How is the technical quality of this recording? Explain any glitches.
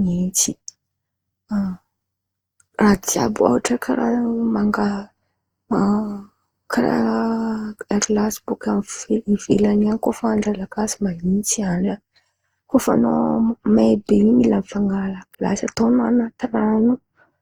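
The recording has a clear technical flaw: generation loss throughout the speech. The likely cause is the audio being decoded and re-encoded through a lossy codec around five times, with the character pointing to Opus at about 48 kbit/s. Each pass re-quantises on a shifted frame grid, so the errors stack. The result is swirly, hollow, smeared speech that sounds worse than that bitrate alone would, with consonant attacks blurred.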